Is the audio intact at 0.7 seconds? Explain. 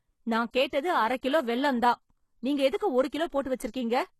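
No. From 0.68 to 0.73 s there is pre-echo, a burst of hiss lasting about 49 ms just before "அரக் கிலோ வெல்லம் தான்". The codec spreads its quantisation noise across the whole transform block. Because the attack falls late in that block, noise scaled to the loud onset also fills the quiet gap ahead of it. The result is a brief wash of noise before the attack, which then sounds soft and smeared rather than crisp.

That moment also carries the damage heard throughout the clip. Nothing is present above 12.3 kHz, and the treble sounds synthetic rather than recorded, with s sounds coming out gritty and lispy. The likely cause is HE-AAC compression, at a low bitrate in keeping with about 16 kbps. Only the lower spectrum is coded, and the upper bands are rebuilt by spectral band replication, so harmonics fail to line up across the crossover.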